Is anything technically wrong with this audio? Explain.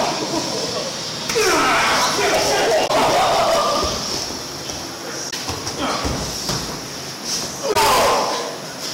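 Yes, two faults are present. Hard clipping runs through the whole clip. The signal is driven about 24 dB past what the chain can pass, so roughly a seventh of the samples are cut flat. Those squared-off peaks generate strong high harmonics, giving a harsh, fuzzy distortion on every loud passage.

Damaged data in a compressed stream appears three times, at 2.84–2.90 s, 5.27–5.34 s and 7.69–7.76 s. Each burst lasts about 70 ms, and they recur roughly every 2.4 s. Corrupted bytes make the decoder misread frames and resynchronise, producing a brief chirp or squawk.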